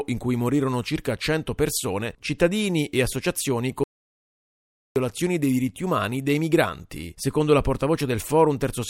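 The input signal was likely lost for a moment while the recorder kept writing silence: an audio dropout to silence from 3.84 to 4.96 s. The speech cuts off after "persone cittadini e associazioni", leaving about 1.1 s of dead digital silence with no room tone, then resumes abruptly at "dei diritti umani dei".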